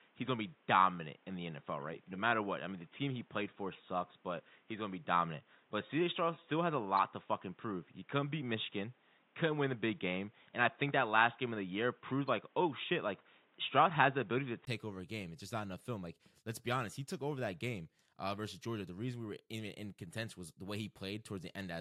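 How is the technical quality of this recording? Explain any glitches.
The recording has two faults, both in the first two-thirds of the clip.

Input switched to a poorer device, 0 to 14.67 s: the speech has nothing above 3.8 kHz and sounds dull and boxy, with a noise floor about 35 dB down. The likely cause is a narrowband device that switches to a better one at 14.67 s. After a brief 20 ms gap, the sound opens up and shifts about 5 dB in level just before "over a game".

Corrupt frame decoded, 6.97 s: a single compressed frame arrived with flipped bits, and the decoder played it anyway. The misread values scattered energy to the wrong frequencies for that one frame, producing a short glitch peaking at about -25 dBFS.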